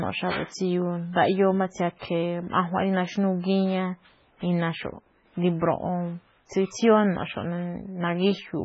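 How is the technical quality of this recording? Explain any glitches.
The quality is poor: heavy compression damage runs through the whole speech recording.

From start to finish, the audio has nothing above 7.6 kHz, and the remaining detail sounds watery and swirly, with metallic chirps on s sounds. This is likely MP3 compression at a very low bitrate, consistent with about 16 kbps. Starved of bits, the encoder cuts the treble at a fixed point and drops weaker frequency components, which flicker on and off between frames. A spectrogram would show a hard ceiling at 7.6 kHz and a patchy, blocky texture below it.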